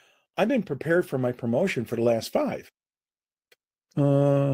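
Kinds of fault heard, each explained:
No technical faults can be heard in this recording.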